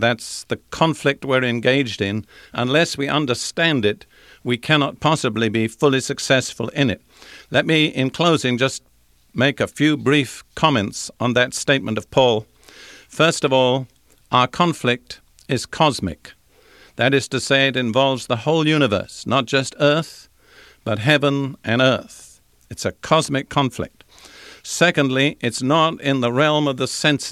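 Nothing in this bit of speech stands out as a technical fault at any point, so there's nothing here to flag.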